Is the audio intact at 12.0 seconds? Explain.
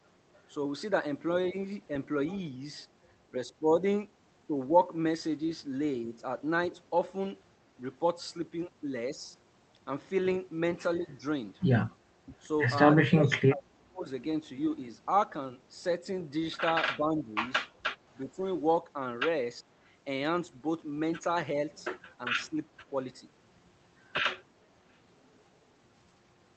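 Yes, the speech at 12.0 s is intact, with nothing more than the call path's usual coding and its high-frequency limit near 8 kHz.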